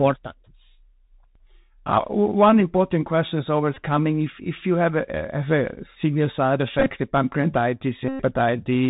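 Bluetooth CVSD headset codec damage runs throughout this speech clip: one-bit delta coding at 64 kbps removes everything above 4 kHz, roughens sibilants and leaves a granular hiss beneath the speech. Bluetooth headset packet repeats occur at 3.74 to 3.76 s, scattered between 6.79 and 6.91 s in short runs of around 10 ms, and at 8.09 to 8.23 s, the last lasting about 109 ms. Each is lost headset audio replaced by the previous packet's data replayed, giving a buzz near 267 Hz while it lasts.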